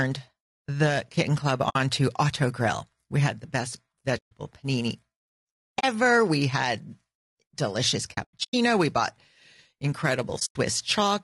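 Throughout, the speech sounds rough and grainy, with noise between harmonics and a dulled top band, likely low-delay AAC compression (AAC-ELD) at a bitrate near 32 kbps. AAC frame loss with muting leaves soft-edged silent holes at 1.69–1.76 s, 4.17–4.32 s, 5.79–5.84 s, 8.13–8.54 s (scattered gaps, longest about a tenth of a second) and 10.39–10.56 s.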